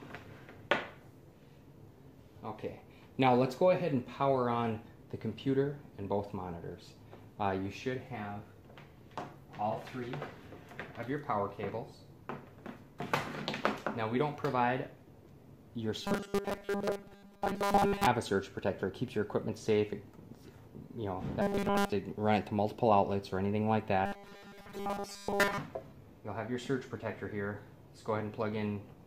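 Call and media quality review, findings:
Robotic sound from repeated short buffers, 16.03–18.07 s, 21.42–21.92 s and 24.06–25.59 s. Rigid metallic buzz at a fixed 200 Hz, fitting a 5 ms loop. Most of the first and third spans are affected, and nearly all of the second. Likely cause: the playback or jitter buffer is starved, so the last 5 ms is replayed while fresh audio is skipped. Unlike dropouts or gaps, there is no silence. Unlike a pitch shift, the buzz pitch stays fixed.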